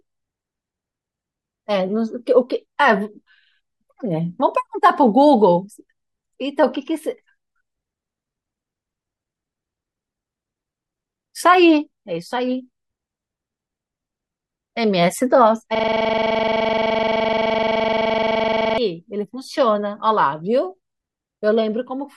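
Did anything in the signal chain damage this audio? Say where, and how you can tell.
Yes. A system hang loop at the driver or buffer stage: from 15.75 to 18.78 s the system froze while the hardware kept cycling one buffer. The same 42.67 ms slice of speech repeats about 70 times as a 23.4 Hz machine-gun stutter, which fits a 2048-sample buffer.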